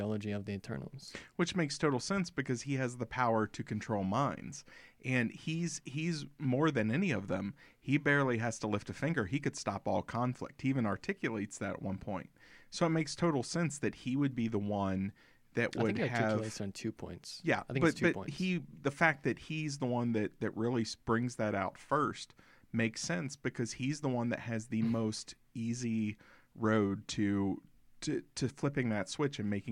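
Speech, with no technical faults.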